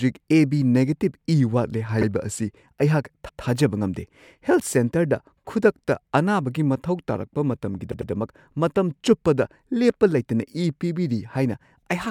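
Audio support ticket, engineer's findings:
Repeated frames, speech stutters at three points. 2.01–2.05 s: 48 ms block played twice, fits two duplicated compressed frames. 3.28–3.42 s: 144 ms block played twice, longer audible stutter. 7.91–8.10 s: 96 ms block played three times in total, adding 192 ms. Probable component: encoder output or transport path writing or sending the same frames again, which the decoder then plays as fresh audio. Clip runs longer by the repeated time.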